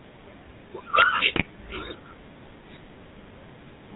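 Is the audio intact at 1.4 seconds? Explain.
No. GSM bit errors hit from 1.32 to 1.44 s, so 1.4 s falls inside the damaged stretch. Flipped bits reached the decoder, and several of its 20 ms frames were rebuilt from corrupted filter, pitch and gain values. The sound fits a bit error rate of about 2.5%. For that brief stretch the spectrum is twisted and the level jumps, and the sound breaks into a squawking, gargling burst with pops.

Underneath and throughout, including at 1.4 s, the GSM full-rate codec is plainly audible at 13 kbps. It rebuilds the signal from a vocal-tract filter driven by regularly spaced pulses, keeping only every third excitation sample, and passes nothing above 4 kHz. The result is a dull, band-limited sound with a buzzy, gravelly roughness on the voice.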